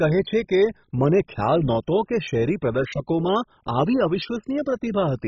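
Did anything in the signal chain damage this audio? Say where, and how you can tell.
Yes. MP2 compression damage runs through the whole speech clip, most likely at the codec stage: nothing survives above 7.2 kHz, and the remaining bands flicker with a gurgling, granular roughness. Starved of bits, which fits a very low rate around 16 kbps, Layer II drops upper sub-bands and coarsely quantises the rest.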